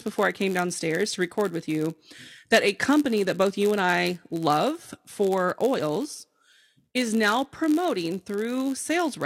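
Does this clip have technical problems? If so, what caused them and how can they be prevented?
Yes. A block size mismatch (padded) runs through the whole speech clip. One stage hands over blocks a little shorter than the next stage reads, and the leftover slot in each block is filled with zeros. The result is a tiny gap about 91.5 times a second, which you hear as a steady buzz at 91.5 Hz. The speech also plays slightly slow, at 0.996 times normal speed, with pitch basically unchanged. To prevent it, make sure every stage agrees on the same block size.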